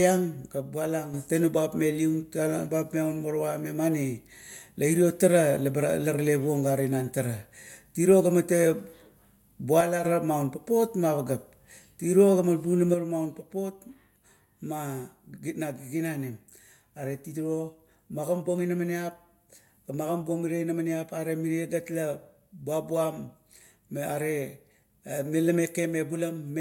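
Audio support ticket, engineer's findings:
One channel drops out, three occurrences: 0.55–1.14 s, 9.81–10.05 s, and 12.94 s to end of clip. Probable component: one leg of the stereo path. Mechanism: the mono sum receives only one side, so shared content is halved. Symptom: speech level steps down abruptly by about 6 dB and anything present only in the lost channel vanishes. First two recover abruptly. Third never recovers.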